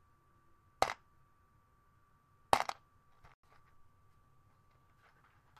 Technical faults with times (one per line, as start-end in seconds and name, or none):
3.34-3.44 digital broadcast dropout